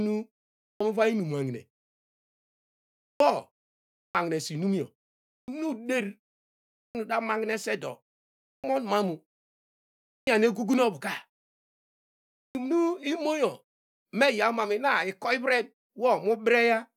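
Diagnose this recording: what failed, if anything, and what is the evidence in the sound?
Playback stage: clipped start after a pause at 0.63, 3.04, 3.98, 5.3, 6.77, 8.48, 10.09 and 12.37 s. After gaps of 0.4 to 1.4 s, speech jumps in missing its first 160 to 180 ms. The output device is dozing through silence and wakes too late.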